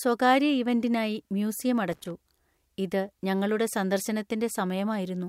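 From 1.92 to 2.11 s the speech is broken by loose connector crackle: a worn or dirty contact repeatedly opens and closes, chopping the signal on and off. For about 0.19 s the result is an irregular, scratchy burst of crackle over the audio.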